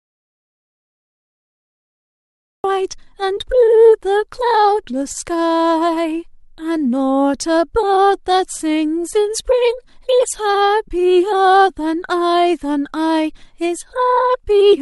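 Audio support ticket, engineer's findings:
Audio dropout to silence from the very start to 2.64 s. Already under way when the clip begins, dead silence, no room tone. Likely a lost input (unplugged mic, dropped link or stray mute) while the recorder kept writing. Nothing recoverable there.

AAC frame loss with concealment at 5.12 to 5.17 s. Brief smeared, noisy patch, about 30 ms long, which fits roughly three lost frames. The decoder's concealment papered over the gap from the last good spectrum instead of leaving a hard hole.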